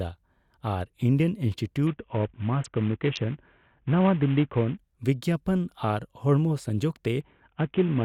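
From 1.87 to 4.77 s, just before "ᱵᱤᱜᱽᱜᱟᱯᱚᱱ ᱟᱨ ᱦᱚᱲᱢᱚ ᱥᱚᱝᱡᱳᱜᱽ", and again from 7.21 s to the end, the speech turns dull and gritty in a Bluetooth SBC bit pool drop, which fits the link falling from a bit pool of 28 to about 4, near 48 kbps. Starved of bits, the top sub-bands vanish and the rest are coarsely quantised. Unlike a clean low-pass, it adds grainy noise, and unlike packet loss, the sound never stops.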